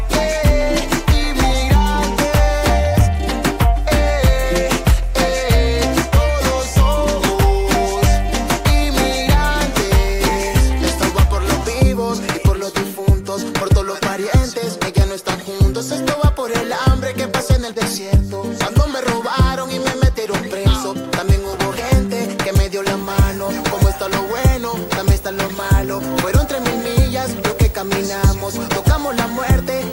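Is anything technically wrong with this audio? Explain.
Yes. From 22.99 s to the end, video or display buzz appears. A screen cable couples into the audio, giving a 59.94 Hz field-rate buzz with hash, plus a 15.7 kHz line tone, roughly 20 dB below the sound.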